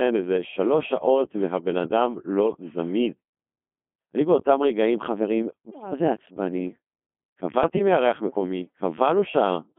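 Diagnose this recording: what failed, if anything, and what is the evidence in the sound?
Codec stage: the whole clip passes through a Codec 2 vocoder. The speech sounds robotic and buzzy, confined to 200 Hz to 3.4 kHz. Sine-wave resynthesis from pitch and envelope data fits the 2.4 kbit/s mode.

Radio link stage: bit errors on digital voice radio at 5.70–5.92 s and 7.64–7.79 s. The synthetic voice lurches in pitch and level and warbles. Errors of a few percent corrupt whole frames' parameters.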